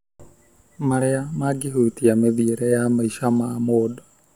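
No technical faults can be heard anywhere in this speech recording. Nothing in it calls for a timestamp or an explanation.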